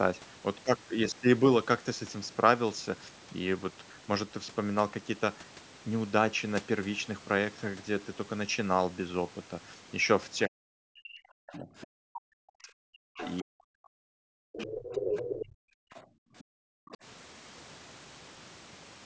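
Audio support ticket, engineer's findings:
Speech suppressed in double talk, 10.47–15.61 s: talker dips and breaks up in pieces across roughly 4 s, worst drop around 40 dB. Likely the echo canceller during double talk. Both sides were going at once, it couldn't separate near talker from loudspeaker echo, so it pulled everything down. High end sits in the call mic's usual band, nothing above 8 kHz.

Other side's voice leaking through, six bits. 11.81–11.87 s at about -20 dB vs. speech. 13.20–13.43 s at about -15 dB. 14.59–15.45 s at about -5 dB, the loudest and longest, almost level with the talker. 15.93–16.02 s at about -25 dB. 16.38–16.44 s at about -30 dB. 16.89–16.97 s at about -25 dB. Likely residual echo: far end plays on the talker's speaker and the canceller isn't subtracting all of it from the mic.

Background gated by the echo canceller, 15.89–16.89 s: room tone ducks hard, about 40 dB at its deepest, roughly 0.7 s of dropout in total, then comes back. 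Canceller clamped the mic while the loudspeaker was active, released when it let go. The faint leaks at 15.93 and 16.38 s fall inside this window, and the one at 16.89 s starts at its end.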